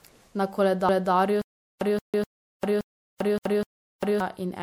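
Throughout the speech there is a swirly, hollow, smeared quality with softened consonant attacks, the sound of generation loss, likely from about three successive MP3 encodes at a rate that fits 96 kbit/s. Each pass requantised on a shifted frame grid, stacking noise and spectral holes.

At 0.89 s, 2.14 s and 3.39 s, a 250 ms stretch plays twice, giving a stutter at one-second spacing. These are overlapping chunks: the audio was handled in 1 s blocks, each starting a quarter second before the previous one ended.

From 1.42 s to 4.20 s, a 0.18 s fragment repeats four times, each followed by about 0.40 s of digital silence, a 0.57 s cycle. This is stutter with silent gaps, with the replayed fragment and dead air pointing to stalled playback retrying its last buffer. The audio due in those gaps is lost.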